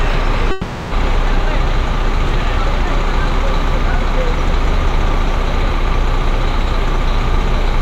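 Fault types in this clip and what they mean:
Long network dropout: audio likely stopped arriving, so from 0.51 to 0.93 s a fading buzz or hiss continues the last sound, replacing what was lost.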